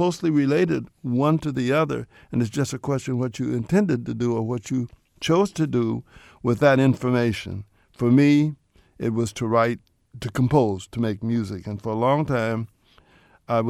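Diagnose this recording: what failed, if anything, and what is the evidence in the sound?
Nothing in the recording points to a failure at any stage of the chain, since the signal holds steady and continuous throughout with no audible break, distortion or level disturbance.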